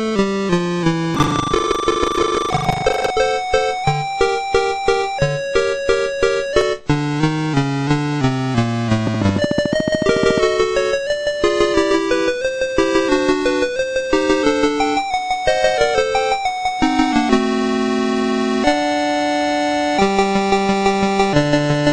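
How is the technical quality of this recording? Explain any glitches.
The recording has three kinds of glitch: a stretch of buffer tearing, two dropped buffers, and a train of clicks.

From 1.12 to 3.12 s there is buffer tearing. The writing program and the reading hardware have slipped so that they cross within every period. Somewhat under half of each buffer replays audio from roughly 150 ms earlier, with hard joins, giving a robotic 25 Hz buzz. It follows the signal rather than sitting on top of it, which separates it from the clicks later.

At 2.35 s the sound jumps ahead, with roughly 20 ms missing, and at 6.61 s a smaller jump skips a few milliseconds. The likely cause is a dropped buffer (overrun): samples were overwritten before the program read them, and the two sides were spliced together. Each is a single skip with no gap of silence, unlike the continuous tearing buzz.

From 9.07 to 10.39 s a train of clicks runs at a steady 13.8 per second, about 20 in all, peaking about 10 dB above the audio. 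The clicks have matching shapes and an even spacing, likely from interference or a faulty connection or supply injecting pulses. Because they are added on top rather than cutting or repeating the audio, they differ from both buffer faults.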